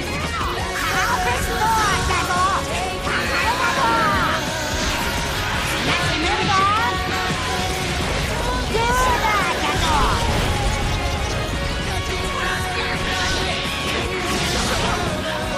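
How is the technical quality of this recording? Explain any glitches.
The technical quality of the recording is sound, and there are no glitches to explain.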